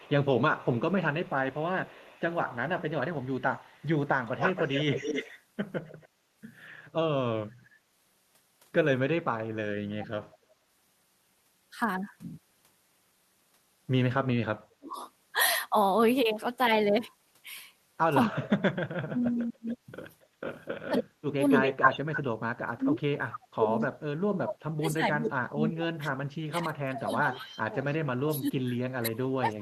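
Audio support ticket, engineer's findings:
Echo leak at 0.0–6.08 s, 19.22–22.21 s and 27.87–27.95 s: discrete delayed copy of speech, 191 ms then 270 ms, about 10 dB down, then near full level, then faint. Likely far-end echo canceller under-cancelling loudspeaker pickup. A distinct repeat, not smeared room reverb.

Speech suppressed in double talk at 7.45–7.76 s, 9.63–10.28 s, 14.69–14.97 s and 18.31 s to end: near-end speech ducked about 35–40 dB while the other side talks. Likely echo canceller or suppressor gating both talkers. Level-driven ducking, not the abrupt silent gaps of packet loss.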